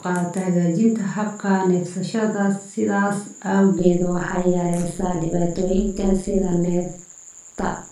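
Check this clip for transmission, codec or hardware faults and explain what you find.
One fault is present: overlap-add ripple from 3.79 s to the end. The speech was split into windowed frames and rejoined with overlaps that don't sum to constant gain, so level swings by about 60 dB roughly 150 times a second, giving a harsh, robotic buzz.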